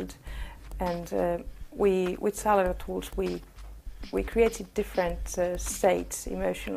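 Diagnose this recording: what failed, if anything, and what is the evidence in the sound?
Nothing failed in this recording, and the sound offers no evidence of any fault.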